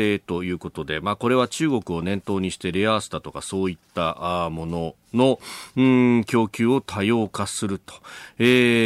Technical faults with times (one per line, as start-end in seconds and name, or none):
none